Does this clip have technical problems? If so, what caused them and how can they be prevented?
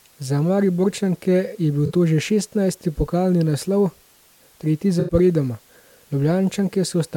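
Yes. AAC frame loss with concealment: frames went missing and the decoder refilled the gaps from the last good spectrum, leaving brief smeared, noisy patches at 1.86–1.92 s, just before "to že šestnajsti pokalni", and at 4.99–5.14 s. The second gap is about twice as long, which fits four frames lost rather than two. Using forward error correction or retransmission on the transport link would prevent this.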